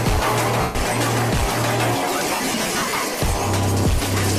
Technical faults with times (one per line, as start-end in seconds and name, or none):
0.61-0.75 lost LE Audio frames
2.20-2.98 lost LE Audio frames